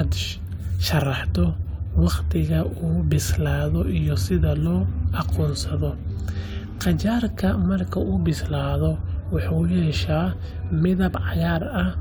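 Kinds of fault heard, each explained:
No technical faults can be heard anywhere in this speech recording, and the signal comes across as intact and continuous throughout.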